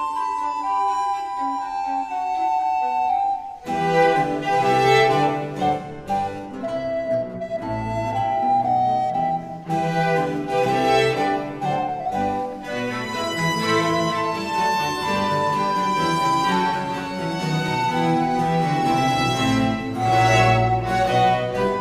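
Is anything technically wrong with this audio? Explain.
No, nothing technically wrong can be heard in this audio, and the signal stays steady and intact throughout.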